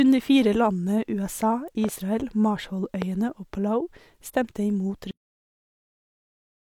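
At 1.84 to 1.91 s a loud pop occurs as two sharp pops in quick succession, roughly 10 dB above the speech, which continues underneath. A second loud pop at 3.02 to 3.04 s is a single pop, roughly 15 dB above the signal. Both are likely voltage steps from a plug, switch, static or driver glitch, shaped by the circuitry that follows.

At 5.11 s the clip has a cut-off end: the speech stops mid-sound and drops straight to silence with no natural decay, which lasts to the end of the file. The final buffers were never written or played out.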